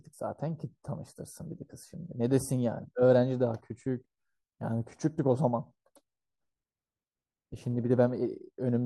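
No technical faults can be heard anywhere in the recording.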